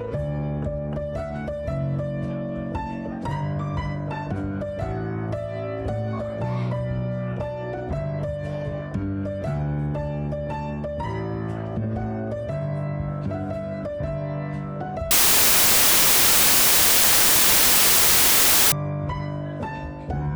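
Samples built from the wrong bytes run from 15.11 to 18.72 s. Each sample's bytes are assembled misaligned or in swapped order, so the rapidly varying low bits land in the most significant position. The result is a burst of loud, harsh broadband noise replacing the sound for those 3.6 seconds.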